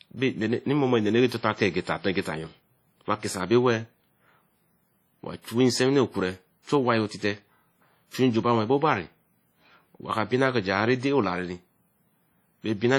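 Throughout, heavy codec damage leaves the speech ringing and washy, with breathing hiss; likely WMA compression at a low bitrate, with a spectrogram showing smeared, patchy bands.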